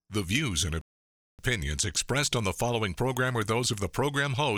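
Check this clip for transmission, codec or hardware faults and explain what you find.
One transmission fault is audible: a rebuffering stall in the speech. From 0.81 s to 1.39 s, right after "views and", the audio drops to silence and then picks up again with "expressed on the following", exactly where it left off. The player had run out of downloaded audio and paused until more arrived, so nothing is missing but about 0.57 s of dead time is inserted. On a waveform this appears as a flat gap, and on a spectrogram as a blank vertical band with the speech continuing unbroken on either side.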